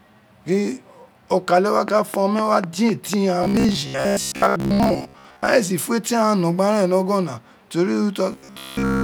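It's a speech clip. Right after "gin okale", from 1.88 to 3.15 s, there's a regular train of clicks, about four a second and roughly seven in all, poking out around 10 dB above the speech, likely interference or a faulty connection. Then there's robotic sound from repeated short buffers at 3.43–5.47 s and again at 8.32–9.03 s: a metallic buzz at 66.8 Hz, which fits a roughly 15 ms buffer being looped. Most of the first stretch is repeats, and the last one is entirely repeats. The likely cause is audio arriving too seldom to keep the buffer fed.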